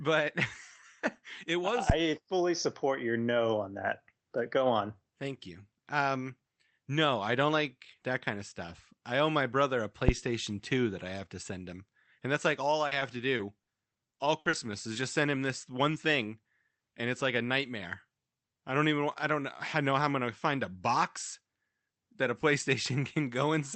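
Phantom power thump at 1.90 to 2.00 s, between "it was" and "fully support your no", and again at 10.09 to 10.20 s, right after "owe my brother a". A supply switched on or off on a live input sends a voltage step through the coupling capacitors. Each time, the step lands as a deep, low thump lasting about a tenth of a second, and it falls away quickly, in roughly 25 ms.

Repeated packet loss (robotic sound) runs from 12.87 to 14.55 s. Around ten separate holes open in this stretch, the longest about 60 ms. Each one is patched by stretching the last bit of sound forward. About 300 ms is filled in this way, nearly a fifth of the span, so the audio turns choppy and mechanical, with small pieces missing.

Short concealed packet loss at 14.93 to 14.97 s, just before "just send him this". About 20 ms of the stream arrived too late to decode. The receiver bridged the gap by extending the preceding sound and then blended back into the real signal, which leaves a brief smear in the audio. 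Across the clip the Opus call path cuts off the highs above about 8 kHz.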